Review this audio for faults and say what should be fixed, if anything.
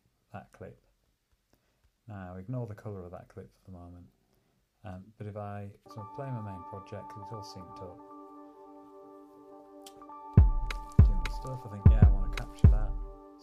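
Nothing here needs fixing.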